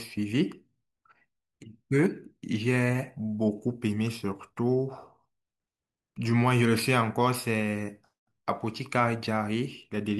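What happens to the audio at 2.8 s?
Nothing goes wrong at 2.8 s; the speech carries on intact through that moment, with no dropout, click or distortion.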